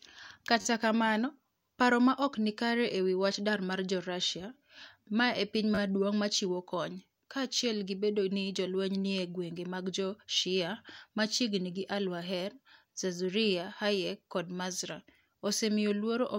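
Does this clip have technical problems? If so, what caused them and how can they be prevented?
Yes. A repeated buffer occurs at 0.61 to 0.65 s, just before "kamano paro ma ok", and at 5.75 to 5.78 s, between "ma e piny" and "maduong ' machiwo kony". Fresh audio arrived late, so the device replayed its last block of about 11 ms, four extra times at the first spot and three extra times at the second. Each repeat ends in a hard join, so a brief buzzing stutter is heard, which fits a 512-sample buffer. Giving the playback buffer more headroom, or keeping the audio thread free of other work, prevents it.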